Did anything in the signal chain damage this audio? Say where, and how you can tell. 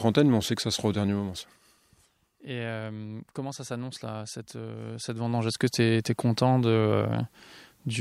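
Yes. The speech falls about 15 dB under a fine ticking from 1.02 to 1.84 s, then rises about 15 dB with the same zipping from 4.91 to 5.63 s. This zipper noise comes from buffer-stage gain moving in unsmoothed 1 dB jumps, roughly twenty a second.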